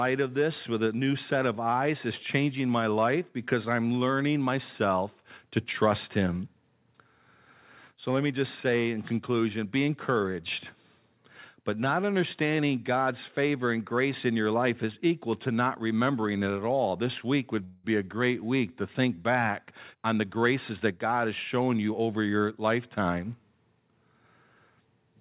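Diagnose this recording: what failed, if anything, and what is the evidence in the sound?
Network: late packets likely drained the jitter buffer, causing a call audio freeze. At 17.64 s, after "week would", a 0.2 s fading buzz delays "be a great week" without losing any of it.

Call processing: a jitter buffer speed-up cut repeated pitch periods from 19.71 to 21.99 s, after "week to think back". The speech runs 8% fast at unchanged pitch up to "your lifetime".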